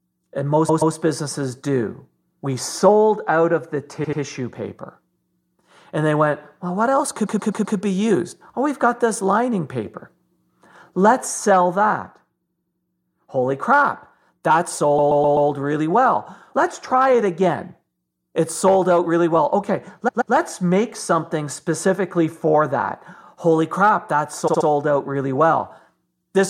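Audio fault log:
0.68–0.94 s, repeated frames: a 128 ms block plays two extra times, adding 256 ms. It is an exact-copy stutter, not a decaying echo.
2.30–2.41 s, repeated frames: after "businesses do", a 107 ms block plays once more, adding 107 ms. The stretch lengthens rather than going silent, unlike a dropout.
4.03–4.20 s, repeated frames: an 85 ms block plays two extra times, adding 171 ms. The stutter comes from identical copies butting together, not reverberant smearing.
7.25–7.76 s, repeated frames: a 128 ms block plays four extra times, adding 512 ms. This is a long rhythmic stutter of one identical fragment, heard as a loop rather than a skip.
12.46–12.80 s, repeated frames: an 85 ms block plays four extra times, adding 341 ms. The rapid identical repeats set it apart from a decaying flutter echo.
14.98–15.49 s, repeated frames: a 128 ms block plays four extra times, adding 512 ms. 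The same fraction of a second loops and time is added, so the material is not skipped.
20.07–20.33 s, repeated frames: just before "make something specifically for", a 128 ms block plays two extra times, adding 256 ms. No audio is missing.
24.47–24.66 s, repeated frames: between "crap that" and "out really", a 64 ms block plays three extra times, adding 192 ms. This short stutter comes from identical copies, not from a gap.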